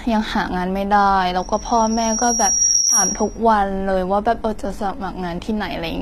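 Throughout, the treble sounds synthetic, with gritty, lispy sibilants and a hard ceiling at 14.9 kHz, likely from HE-AAC compression at a bitrate around 24 kbps. Spectral band replication copies lower bands upward, so on a spectrogram the upper band looks smeared and repeated, then stops abruptly.

From 1.38 to 3.39 s a loudspeaker feedback squeal appears. Loop gain above one at 5.6 kHz makes a pure tone swell over about one and a half seconds to roughly 5 dB above the sound. It shows as a bright horizontal line on the spectrogram and a growing envelope in the waveform.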